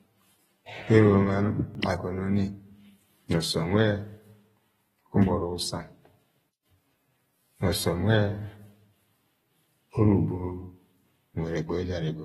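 Throughout the speech, a low-bitrate encode has likely thrown away detail to save data. That is consistent with AAC compression, fitting AAC-LC at around 24 kbps. With so few bits, the encoder quantises the spectrum coarsely against its hearing model and cuts everything above about 15.9 kHz. The damage is plainly audible: a dulled, smeared top end, with a warbling, fizzy texture wherever sibilants and sustained sounds hold.

At 1.75 s, new audio failed to reach the output in time, so the device replayed its last buffer. This is a repeated buffer. The replayed slice is about 1.33 ms long, which fits a 64-sample buffer. It plays twice with a hard join, and essentially nothing is lost. Because the piece is so tiny, it is heard as a click or brief buzz rather than a stutter.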